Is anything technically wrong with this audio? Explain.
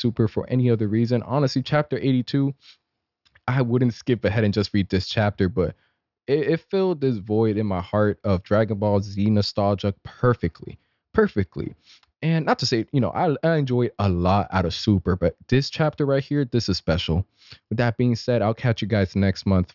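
No, nothing technically wrong can be heard here.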